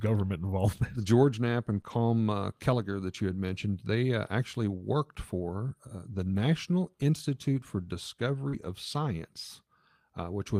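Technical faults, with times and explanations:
1.77–1.79 s, 1.86–1.92 s and 8.53–8.71 s: lost packet rebuilt from error correction. The speech turns rough and noisy without a gap, because the decoder played low-bitrate backup copies of lost packets. The longest stretch, about 100 ms, fits several consecutive lost 20 ms packets.
1.81–1.86 s and 8.49–8.55 s: short concealed packet loss. Brief smears or wobbles appear where audio arrived too late, so the receiver extended the preceding sound for about 27 ms and 36 ms before blending back.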